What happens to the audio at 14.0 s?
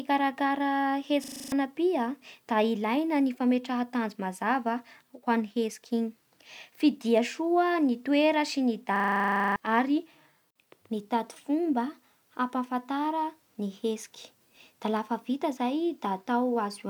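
Nothing goes wrong at 14.0 s; the speech carries on intact through that moment, with no dropout, click, distortion or other audible fault.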